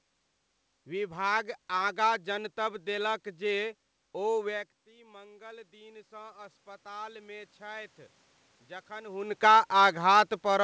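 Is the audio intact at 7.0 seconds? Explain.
No. At 7.0 s the automatic gain control is partway through a gradual rise that runs from 4.92 s to 8.01 s. Just before, around 4.5 s, the talker moved away and the level at the microphone fell by about 19 dB. The gain control reacts by raising its gain slowly, about 9 dB over roughly three seconds. Voice and room noise swell together, so the background climbs along with the speech.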